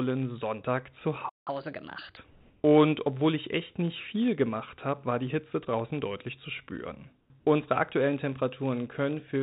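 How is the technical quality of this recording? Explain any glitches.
The recording has clear technical faults: a steady buzz throughout, one dropout followed by a sped-up stretch, and two patches of flat, synthetic-sounding background. The speech is band-limited, with nothing above 4 kHz, which fits narrowband telephone-style coding.

Block size mismatch (padded): A constant 99.6 Hz buzz runs throughout, with speech running slightly slow at 0.996 times normal speed. Short zero-filled gaps are inserted in every block.

Playback stall: From 1.29 to 1.47 s, about 175 ms, the sound cuts out mid-flow. The player likely ran out of data and then resumed.

Catch-up at higher speed: From 1.47 to 2.17 s, speech runs at 1.25 times normal speed and roughly four semitones higher. The player is recovering the time lost in the stall.

Comfort noise in place of the background: From 2.3 to 2.64 s, just before "obwohl ich echt nicht", the background becomes steady and featureless, about 1 dB louder. 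From 7.2 to 7.3 s, after "draußen deutlich zu spüren", the same thing happens, about 4 dB quieter. The likely cause is discontinuous transmission filling these pauses with synthetic noise.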